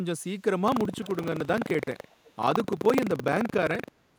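From 0.64 s to the end of the speech, buffer tearing sets in: a steady robotic rattle at about 23.4 Hz, which fits a 2048-sample buffer. The writer and the reading hardware have drifted until they cross within each period, so a small slice of every buffer replays audio from about a tenth of a second earlier, with hard joins on either side. Unlike random dropouts or clicks, the rattle is strictly periodic and follows the signal, vanishing in pauses.

Between 1.03 and 1.25 s, and again between 2.04 and 2.32 s, a faint second copy of the speech trails the original by 440 ms. It sits about 25 dB below the speech the first time and about 30 dB below the second time. This is likely echo leak, loudspeaker sound reaching a microphone and escaping the far end's echo canceller. Room reverberation would smear continuously right behind each sound. Here the copy is a distinct, late, scrappy repeat that appears only in short bursts.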